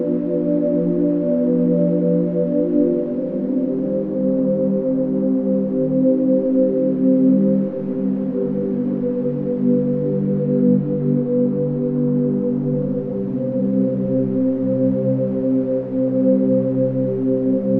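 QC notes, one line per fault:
10.25–12.25 s: adaptive stream at a lower bitrate; treble vanishes above about 4.9 kHz with audible codec artefacts, an abrupt drop to a much lower-bitrate rendition, without any gap.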